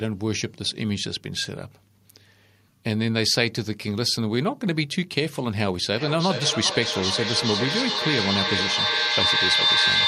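From 5.94 s to the end, feedback echo between two devices sets in. A nearby device replays this microphone's signal back into it, so the speech returns roughly every 400 ms, thinner and ringing, and swells to about 2 dB above the speech. The spectrogram shows evenly spaced, stacked copies, and the waveform grows instead of decaying.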